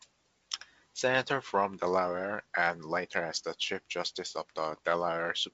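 No faults in this speech; it carries ordinary G.722 wideband telephone coding at 56 kbit/s, with nothing above about 7.7 kHz and only the light coding texture expected at that rate.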